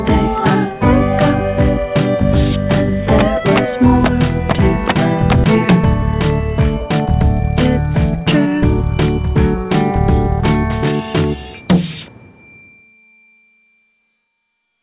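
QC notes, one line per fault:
5.44–5.46 s, skip ahead: roughly a second of audio is missing, and the two sides are joined directly with no filled gap, unlike a dropout.
6.80–7.44 s, 8.15–8.94 s and 9.34–10.39 s, jitter buffer speed-up: trimmed pitch periods give 119%, 110% and 103% speed at unchanged pitch, unlike resampling.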